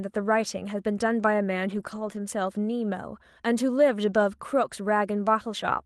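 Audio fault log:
1.71–2.17 s, lost packet rebuilt from error correction: the sound turns rougher and noisier but never drops out. The lost packets were filled in from the low-bitrate backup copies Opus carries inside the following packets, covering roughly 240 ms of the 32 kbps, 12 kHz-wide call.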